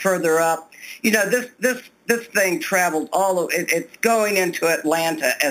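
Throughout, the audio was raised to 44.1 kHz from what sounds like an 8 kHz original by repeating samples with no smoothing filter. This imaging from sample-and-hold upsampling mirrors the spectrum into 4 kHz to 8 kHz, about 12 dB below the signal, as a metallic fizz that follows the sound's level.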